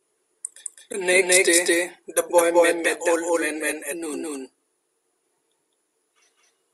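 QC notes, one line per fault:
Throughout: doubled audio track. The speech is heard twice, a second full-band copy trailing about a fifth of a second behind at roughly equal level, dry and without room decay, likely from the signal being captured again through a slower path.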